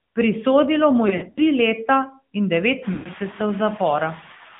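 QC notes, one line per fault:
throughout: noise suppressor artifacts. The background is pulled down by about 5 dB between phrases and rises again under the speech, so the noise floor pumps with the talker. On a spectrogram the noise floor looks patchy and blotchy rather than smooth, with isolated time-frequency speckles. The waveform's quiet stretches show a floor that dips and swells from frame to frame.
throughout: AMR narrowband mobile codec. The speech has the buzzy, synthetic quality of AMR-NB, which fits a mid-rate mode around 10 kbps. The coder rebuilds the voice from a vocal-tract model and a sparse pulse excitation rather than the true waveform. The line band runs only from about 150 Hz to 3.6 kHz, so sibilants sound dull and the lowest fundamentals are thin. A spectrogram shows a hard ceiling near 3.6 kHz, an empty strip at the bottom, and smeared, grainy harmonics.
1.08–1.38 s and 2.94–3.09 s: lost AMR speech frames. 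In the first span, 140 ms of speech is missing, scattered over 280 ms, and the longest gap is 60 ms. The second loses 120 ms. In each, the decoder repeats the last good pitch and spectral shape at falling gain. The sound is drawn out and sags toward silence, then resumes weak and rough. A spectrogram shows frozen, stretched harmonics that fade out. The waveform's envelope droops, then recovers.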